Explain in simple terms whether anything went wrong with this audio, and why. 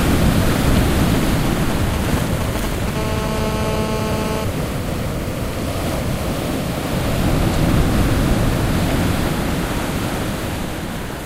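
Two related problems come from a mobile phone sitting too close to the recording equipment.

From 0.67 to 2.90 s there are GSM signalling bursts. An older 2G phone was briefly talking to its network, and the audio circuit picked up those radio pulses and turned them into sound. You hear a galloping dit-dit-dit of short buzzes in uneven groups, not a continuous tone. That broken, rhythmic pattern is what separates it from the next fault.

From 2.96 to 4.44 s comes the GSM phone buzz. Here the phone was in a call, so it transmitted in short bursts, 217 times a second. The result is a hard, raspy, unbroken buzz at 217 Hz with a gritty edge. It has nothing to do with the recorded sound. Unlike the earlier bursts, it stays nearly steady rather than stuttering in clusters.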